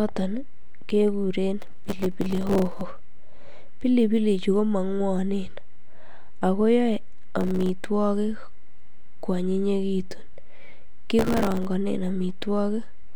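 The processor repeatedly misses its deadlines for buffers of a few milliseconds and replays stale audio in each gap. This produces processor overload crackle, a gritty, hard-edged tearing over the speech from 1.60 to 2.81 s, from 7.41 to 7.69 s and from 11.19 to 11.65 s.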